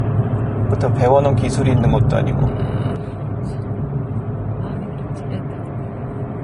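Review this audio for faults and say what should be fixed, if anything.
The whole clip carries audible Vorbis compression damage, likely from a low-quality encode. Nothing sits above 10.5 kHz. The treble is coarsely quantised into grainy hiss, tones sound rough, and attacks blur. This fits a bitrate near 31 kbps. Encode at a higher Vorbis quality setting, or keep a lossless master.

At 2.96 s the level drops by about 5 dB and stays down to the end. This is a sudden gain jump, likely from a gain change applied from one sample to the next without a ramp. The sound and the background noise fall together. Apply gain changes with a short fade or ramp rather than a single-sample step.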